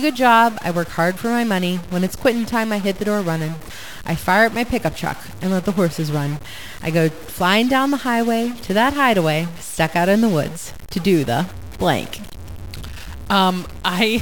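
Speech carries a harsh, buzzy distortion from start to end. The pauses are not silent. They fill with steady noise. The likely cause is a stuck bit. One data bit is held fixed, pushing many values off by a step of about -30 dBFS.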